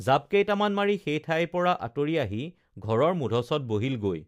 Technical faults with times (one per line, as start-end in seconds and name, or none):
none